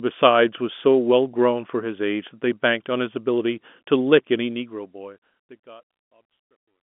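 No faults can be heard in this speech clip. The sound carries the narrow telephone band of G.711 coding, with nothing above about 3.7 kHz, and a smooth fade takes the level down from around four and a half seconds to the end at 6.96 s.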